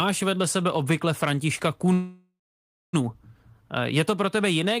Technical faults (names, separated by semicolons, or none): call audio freeze